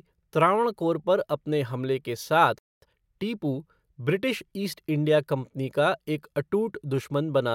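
A speech clip with a playback stall from 2.59 to 2.82 s, right after "पर अपने हमले के": the output drops to silence for about 0.24 s mid-flow and then resumes. The likely cause is the player running out of buffered data or its audio thread being blocked. Immediately afterwards, from 2.82 to 3.04 s, comes a time-compressed catch-up. The speech runs at 2.0 times normal speed with its pitch unchanged, as small segments are cut out and cross-faded to clear the backlog left by the stall.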